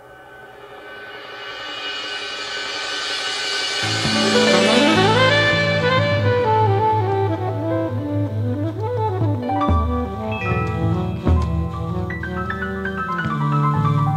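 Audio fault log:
Nothing to log here, as no faults turn up anywhere in the recording.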